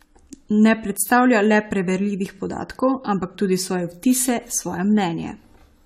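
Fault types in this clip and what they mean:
Generation loss: the speech sounds swirly, smeared and hollow beyond what a single 96 kbit/s AAC-LC encode would explain. That likely comes from around ten successive decode-and-re-encode passes, each requantising on a shifted frame grid so noise and spectral holes accumulate. Consonant attacks blur, and nothing remains above 16.5 kHz.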